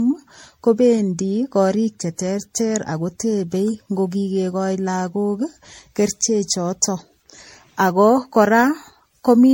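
Throughout the speech, generation loss: swirly, hollow, smeared sound with blurred attacks and nothing above 16.5 kHz, likely from around ten successive MP3 encodes near 64 kbit/s.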